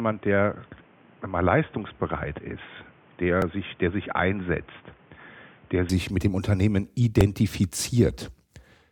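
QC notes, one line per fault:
0.0–5.9 s, input switched to a poorer device: the opening is band-limited with nothing above 3.6 kHz, about 5 dB quieter, and carries a noise floor about 30 dB down. At 5.9 s it clears with no gap, likely a return from a narrower headset or secondary microphone.
3.42 s and 7.21 s, repeated buffer: at each point a 1.33 ms slice plays twice more with hard joins, which fits a 64-sample buffer. Late audio forced the device to replay its last block, so the short repeat is heard as a click or brief buzz.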